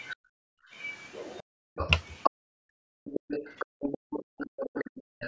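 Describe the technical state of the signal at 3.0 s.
At 3.0 s the talker's speech is near the end of a stretch from 0.59 to 3.05 s where it keeps dipping and cutting out in pieces, at worst by roughly 40 dB, for around 0.7 s in total. This is speech suppressed in double talk, likely because both sides spoke together and the echo canceller muted the wanted voice along with the loudspeaker echo.

Underneath, a second voice is audible at only about 5 dB below the talker. It runs from the start of the clip to its end. The other side's voice is leaking through, most likely loudspeaker sound that the echo canceller failed to remove from the microphone pickup.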